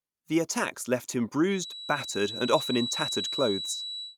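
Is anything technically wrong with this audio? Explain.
Yes. From 1.46 s to the end, a feedback whistle sits behind the speech. It is a thin, steady tone near 3.9 kHz, about 10 dB below the voice, swelling and fading slowly. The likely cause is a loudspeaker-to-microphone loop held just at the edge of feedback.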